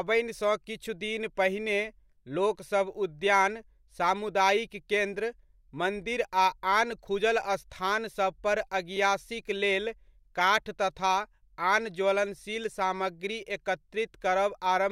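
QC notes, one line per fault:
12.64 s, block of digital silence. A gap of about 0.19 ms drops the speech abruptly to zero and straight back, with no fade at either edge. The hole is far too short to hear as silence. The two hard edges merge into one tick or dip.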